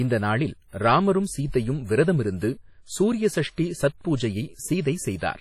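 WMA compression damage runs throughout the speech, likely from a transform encoder at a low bitrate around 32 kbps. Heavy quantisation smears noise across long blocks, giving a ringing, washy texture and a hiss that swells with the speech, with nothing above 15.7 kHz.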